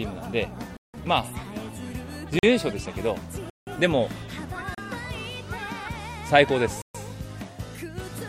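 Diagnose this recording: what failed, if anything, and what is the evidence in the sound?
Abrupt holes at 0.77–0.94, 2.39–2.43, 3.50–3.67, 4.75–4.78 and 6.82–6.95 s are blocks of digital silence, likely from driver or buffer underruns.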